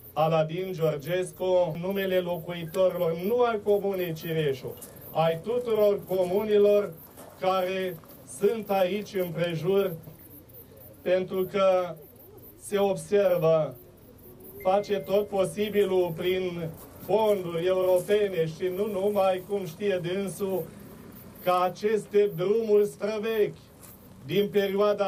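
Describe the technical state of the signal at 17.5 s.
At 17.5 s the signal is intact, with no audible fault at that point.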